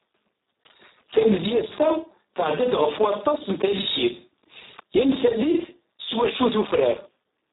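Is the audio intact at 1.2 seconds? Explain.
No. At 1.2 seconds the speech carries Speex codec damage, and it runs through the whole clip. This CELP coder rebuilds speech from a coarse excitation. Here it has very few bits for that, which points to a setting near 4 kbps. The result is hoarse and noisy. Nothing remains above about 3.8 kHz, so the speech also sounds muffled and narrow.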